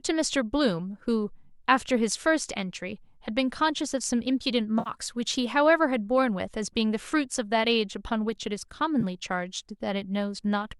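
AAC frame loss with concealment occurs at 4.79 to 4.90 s and again at 9.01 to 9.04 s. The decoder rebuilt the missing stretches, about 70 ms and 20 ms of audio, from the last good spectrum. Each gap sounds like a brief smeared, noisy patch.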